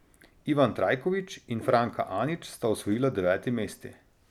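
No technical faults are audible.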